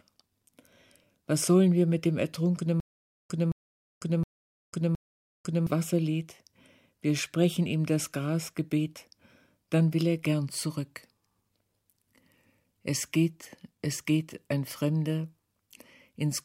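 A stutter with silent gaps from 2.80 to 5.67 s: a 218 ms burst repeats four times, separated by 498 ms of digital silence, likely from a stalled stream replaying its last fragment.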